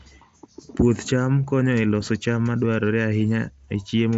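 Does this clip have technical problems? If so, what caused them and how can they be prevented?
No, there are no technical problems to prevent here.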